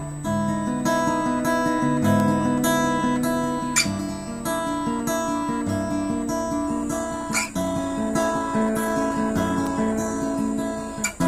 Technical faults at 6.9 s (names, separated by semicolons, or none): adaptive stream at a lower bitrate